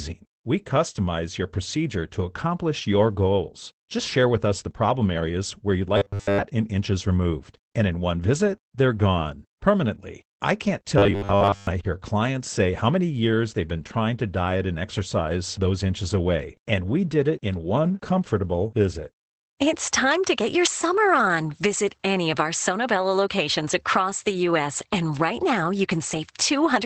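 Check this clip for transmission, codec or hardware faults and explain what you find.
Two faults are present: Opus compression across the whole speech clip, and two short bursts of robotic buzzing.

Opus voice compression runs throughout. The speech has been coded with the SILK linear-prediction coder in wideband mode, so nothing above 8 kHz survives. The excitation is coded coarsely, at a rate that fits roughly 12 kbps in 20 ms frames. The damage is plainly audible: the top end is dulled, and the voice sounds grainy and hoarse with a slightly synthetic edge.

Robotic sound from repeated short buffers occurs from 5.98 to 6.45 s and from 10.98 to 11.67 s. The likely cause is audio arriving too seldom, with playback filling each gap by looping the last 10 ms while fresh audio is dropped. Most of each stretch, roughly two-thirds or more, is repeated material. The looping stamps a fixed 100 Hz buzz over the speech, giving a rigid, metallic tone that tracks the original only loosely.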